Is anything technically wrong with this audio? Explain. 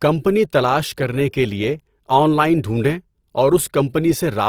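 Yes. Throughout, the speech sounds grainy and rough, with tones turned noisy. This is likely Opus compression in music mode, which fills bit-starved bands with folded spectrum or noise at about 24 kbps.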